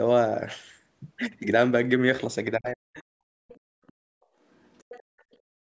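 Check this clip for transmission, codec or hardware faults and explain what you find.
The clip has echo-canceller faults from a call. There is one stretch of speech suppressed in double talk, four short leaks of the other side's voice, and one dip where the background is gated. The call microphone processing leaves nothing above 8 kHz, which is expected.

Speech suppressed in double talk runs from 2.57 to 3.16 s. The talker sinks sharply, by roughly 40 dB at the deepest point, for about half a second. The likely cause is that the echo canceller mistook the talker for loudspeaker echo while both sides spoke, and turned both down.

The other side's voice leaks through at 3.48–3.59, 3.87–3.93, 4.53–5.03 and 5.19–5.37 s. A faint second voice sits behind the talker, roughly 25 to 40 dB down. The longest leak lasts half a second, from 4.53 s. This is likely loudspeaker playback that the canceller did not fully remove from the microphone.

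The background is gated by the echo canceller from 3.59 to 4.14 s. The room sound falls away, by about 33 dB at the deepest point, then comes back. The canceller clamped the microphone hard while the loudspeaker played. The dip starts just as the first leak ends.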